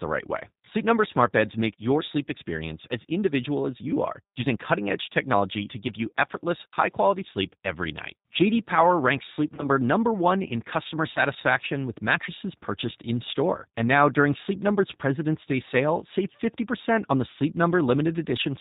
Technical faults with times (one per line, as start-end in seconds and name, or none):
0.00-18.61 G.729 codec
9.55-9.70 VoIP packet loss concealed by the speech codec
11.13-11.22 VoIP packet loss concealed by the speech codec